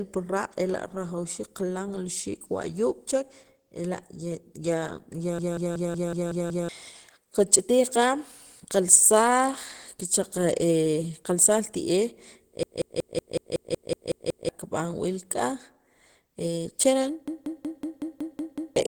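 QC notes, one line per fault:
Throughout: Opus compression, likely at a low bitrate around 16 kbps in the codec's hybrid mode. The speech has a hoarse, muffled roughness, and the higher band sounds grainy and noise-filled rather than cleanly detailed, because the encoder fills starved bands with noise instead of leaving them empty. That noise filling is what separates it from MP3-style damage: there is less swirling or watery warble, just a grainy, coarse texture laid over the speech.
5.39–6.69 s, 12.63–14.49 s, 17.28–18.76 s: system hang loop. In each span one fragment of about 186 ms repeats exactly, 7, 10 and 8 times respectively, giving a machine-gun stutter at about 5.4 repeats per second. The playback froze while the hardware kept replaying the same ring buffer, which fits an 8192-sample buffer. Roughly one and a half to two seconds of audio goes missing each time. Unlike a dropout or a skip, the repeats are identical and evenly spaced.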